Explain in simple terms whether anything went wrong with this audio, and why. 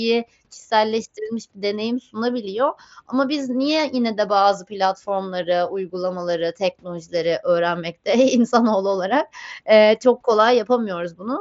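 Nothing went wrong here: it's just speech carried over a normal Bluetooth headset link, which stops the sound a little below 8 kHz, and that's simply how that kind of connection works.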